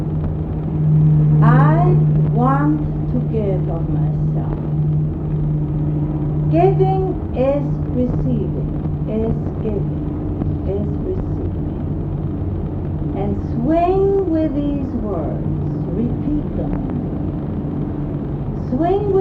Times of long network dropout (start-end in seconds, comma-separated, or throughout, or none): none